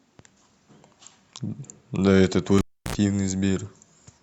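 At 2.58 s a live cable is pulled and plugged in: a pop, 318 ms of near silence, 68 ms of 60 Hz mains buzz, then a second pop at 2.95 s.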